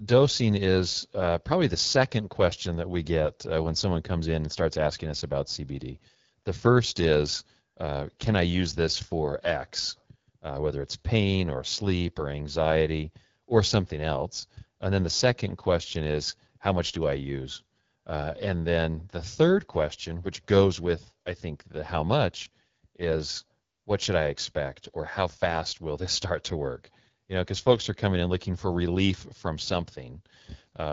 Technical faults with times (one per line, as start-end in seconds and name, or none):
0.00-30.92 AMR wideband (HD Voice) codec